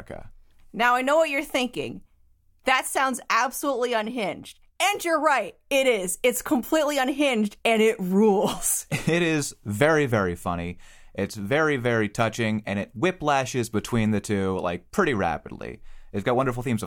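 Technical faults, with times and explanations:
No technical faults can be heard in this speech recording. There is nothing here that calls for a time or an explanation.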